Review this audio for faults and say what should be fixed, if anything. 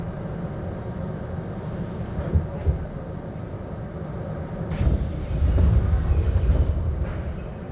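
Nothing needs fixing; no faults are audible here.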